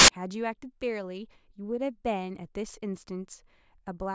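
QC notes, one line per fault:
0 to 0.08 s, file tags played as audio. The speech opens with a short burst of very loud white noise that starts and stops abruptly. This is a block of compressed data, most likely an embedded cover picture, being read out as if it were samples. Compressed bytes are close to random, so they decode as flat, loud static with no tone or shape. The hard edges mark where the tag block begins and ends.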